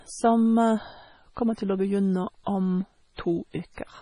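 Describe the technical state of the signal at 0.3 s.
At 0.3 s the speech is watery, as it is across the whole clip. Weak detail flickers between frames, and s sounds turn metallic. This is likely heavy MP3 compression, fitting a low bitrate near 24 kbps.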